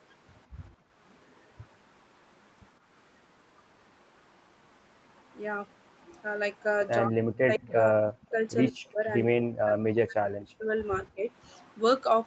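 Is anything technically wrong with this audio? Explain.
Yes. Three kinds of echo-canceller fault can be heard in this speech.

Background gated by the echo canceller, 0.73 to 0.92 s: while the far-end loudspeaker was active, the canceller clamped the microphone hard. It treated the room sound as echo to be removed. The background dips by about 20 dB for roughly a fifth of a second, then returns when the gate releases. It sounds like a brief hole in the ambience.

Echo leak, at 1.29 to 1.41 s, 7.57 to 7.72 s and 11.61 to 11.65 s: a delayed copy of the speech comes back 151 ms late. The likely cause is a loudspeaker-side canceller that failed to remove all of its own playback before sending it back. The first and last scraps are very faint, about 40 dB below the speech. The one around 7.6 s is clearer, only about 25 dB down, and is heard as a ghost trailing the speech.

Speech suppressed in double talk, at 7.07 to 8.39 s, 8.70 to 9.00 s, 9.26 to 10.71 s and 11.14 to 11.22 s: while both sides talk at once, the talker's speech sinks deeply, by something like 40 dB. 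It stays down for about a second or more at a time in the longest stretches, and only shallowly in the short final dip. This likely happens because the canceller cannot separate the near talker from loudspeaker echo, so it turns everything down together.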